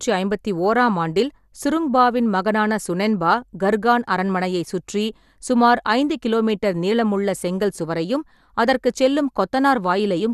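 Speech runs through a likely MP2 compression stage at a starved rate, fitting roughly 80 kbps, so upper sub-bands are dropped and the rest coarsely quantised. Throughout, nothing sounds above 12.2 kHz, leaving the voice dull, with plainly audible gurgling, granular distortion.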